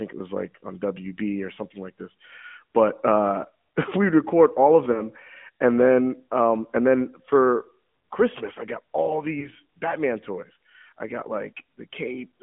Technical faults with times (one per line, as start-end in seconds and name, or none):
0.00-12.43 AMR narrowband mobile codec
4.92-5.02 lost AMR speech frames
9.40-9.49 lost AMR speech frames